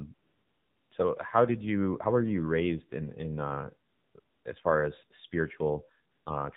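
AMR narrowband mobile codec coding runs throughout the speech: nothing above 4 kHz survives, and the vocal-tract model driven by sparse pulses leaves a plainly buzzy, synthetic tone, which fits one of the low AMR-NB modes around 7.4 kbps.

AMR comfort noise fills four pauses, from 0.14 to 0.92 s, 3.90 to 4.14 s, 4.20 to 4.44 s and 6.12 to 6.26 s. The sender judged the talker silent and stopped sending speech frames, so the receiver substituted smooth synthetic noise that switches abruptly in and out.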